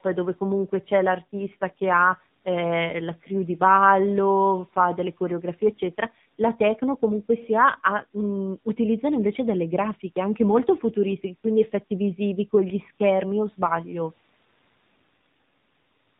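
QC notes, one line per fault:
throughout: AMR narrowband mobile codec. Nothing above 4 kHz survives, and the speech has a buzzy, synthetic edge from the pulse-driven vocal-tract model, which fits AMR-NB at a low rate of about 7.4 kbps. That buzz, not just dullness, separates it from plain low-pass filtering.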